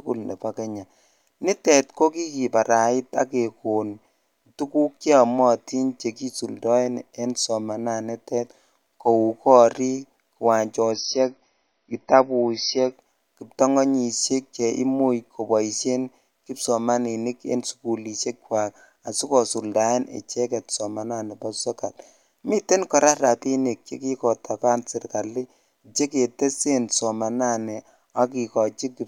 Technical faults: adaptive stream at a lower bitrate

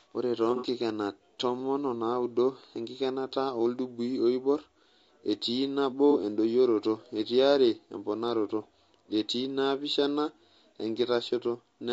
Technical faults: low-delay AAC compression; AAC frame loss with concealment

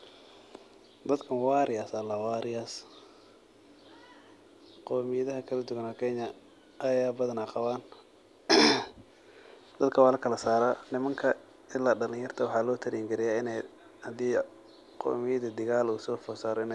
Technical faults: none

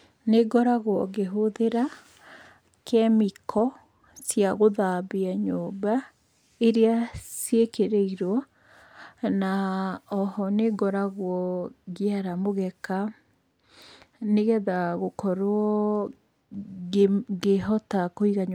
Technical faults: none

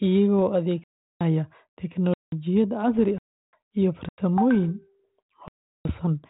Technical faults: bit errors on an ADPCM link; block of digital silence

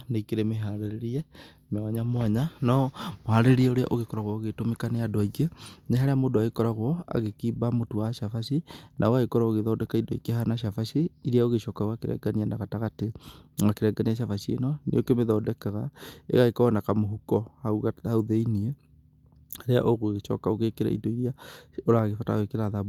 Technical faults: none

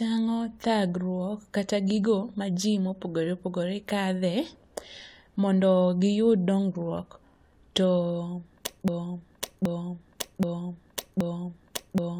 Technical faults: broken-record loop

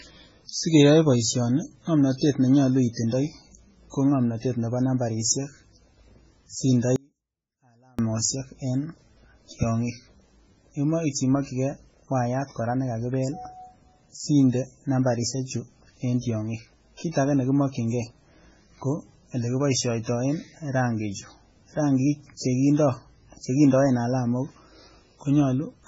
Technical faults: MP3 compression; audio dropout to a faint residue; pre-echo

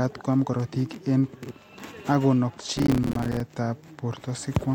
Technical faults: processor overload crackle

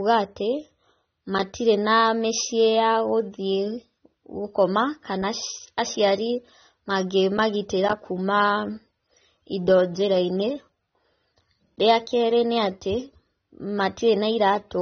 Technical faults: AAC compression

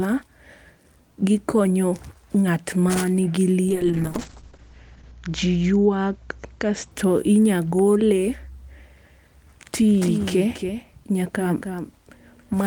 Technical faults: call bitrate drop; doubled audio track

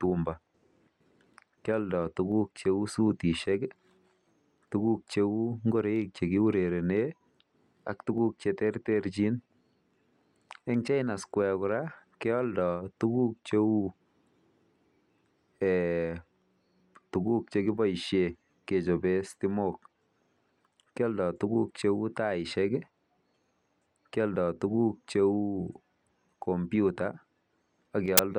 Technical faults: file tags played as audio

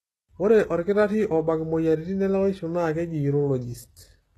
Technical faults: HE-AAC compression

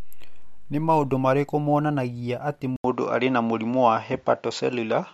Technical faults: input switched to a poorer device

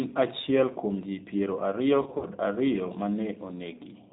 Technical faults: G.729 codec; VoIP packet loss concealed by the speech codec

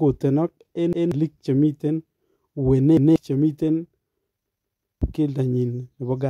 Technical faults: repeated buffer

